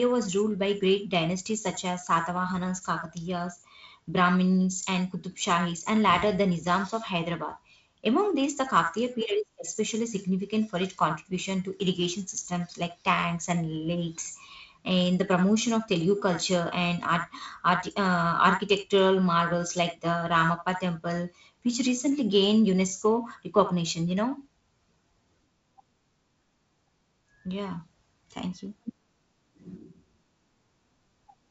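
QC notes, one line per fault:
No faults to report.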